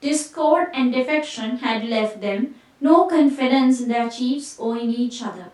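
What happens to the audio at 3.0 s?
Nothing goes wrong at 3.0 s; the speech carries on intact through that moment, with no dropout, click or distortion.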